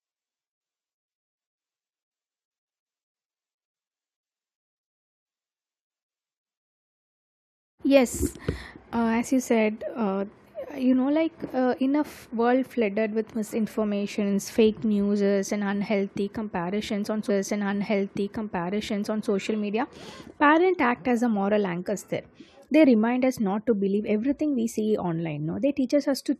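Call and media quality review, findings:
Stream segment repeated, 17.29–19.29 s: player re-queued the same segment, so about 2.0 s of speech after "unhealthy comparisons on" plays a second time, with a small blip at the jump back before "media parents". Probable component: client buffer/playlist handling.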